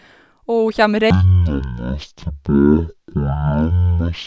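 The speech drops abruptly at 1.10 s into a deep, sluggish drawl that lasts to the end of the clip, slowed to roughly a third of normal pace and pitched down by about 17.6 semitones. This is a wrong sample rate fault: the samples are clocked out far slower than they were captured, with no conversion, so speed and pitch fall together. A ratio of 0.363 fits audio recorded at 44.1 kHz being played back at 16 kHz.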